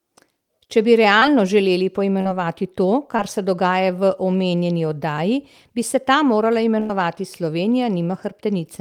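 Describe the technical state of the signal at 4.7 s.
At 4.7 s the speech signal is intact, with no audible technical fault at that moment.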